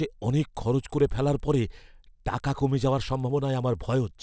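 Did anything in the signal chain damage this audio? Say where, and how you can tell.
Yes, at the sample-rate conversion stage. A resampler restarted on every block runs through the whole speech clip as a steady tick at 20 Hz, heard only under signal. That fits 50 ms blocks converted from 24 kHz to 16 kHz separately, each edge missing its neighbouring samples.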